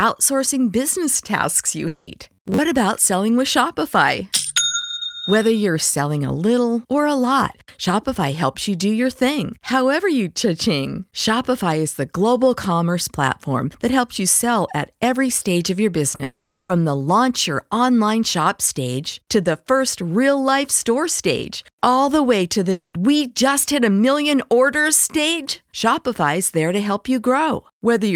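At 1.87 to 2.09 s a long network dropout likely cuts the speech: about 200 ms never arrives, and the receiver stretches the last sound into a fading buzz that carries straight through with no silent gap. On a spectrogram the harmonics freeze into flat horizontal bands that thin out, instead of following the speech's movement.

From 2.33 to 2.64 s comes robotic sound from repeated short buffers. New audio likely arrives too seldom, so a short slice is looped while roughly half the real material is skipped. The loop imposes a rigid 93.8 Hz buzz, which fits a buffer of about 10.7 ms. The speech turns metallic but still loosely tracks its rhythm. A waveform shows near-identical cycles repeating at that spacing, and a spectrogram shows an evenly spaced comb of harmonics.

At 16.15 to 16.21 s there is short concealed packet loss: 40 ms failed to reach the decoder, and the gap is patched by extending the preceding sound, heard as a quick smear or wobble. 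It appears as a brief blurred patch where fine detail stops.

Right after, at 16.23 to 16.71 s, a longer dropout, likely from the network, fills 460 ms. The patch fades to about 160 ms of silence before the speech resumes with the missing part gone. At 22.71 to 22.95 s a third dropout, also likely network-caused, covers 220 ms, ending in about 110 ms of silence. Both show as a smeared tail decaying into a blank strip on a spectrogram, and as an envelope sinking to a flat line in the waveform.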